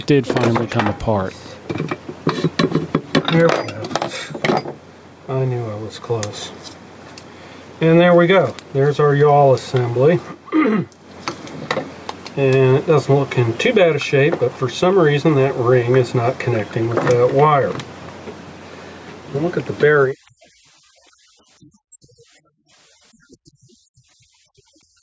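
Gain pumping runs throughout. The level swings about 5 dB, pulled down under loud sounds, likely from a fast limiter. Unlike gating, it never vanishes.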